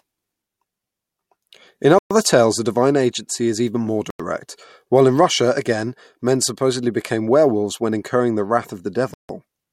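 At 1.99 to 2.11 s, 4.10 to 4.20 s and 9.14 to 9.29 s the speech drops abruptly to silence for 121, 91 and 154 ms, then resumes, first with "tales the divine agency" and second right after "agency is even more". These gaps are likely Bluetooth stalls: radio interference delayed packets, the headphone buffer emptied, and playback halted until retransmitted packets arrived.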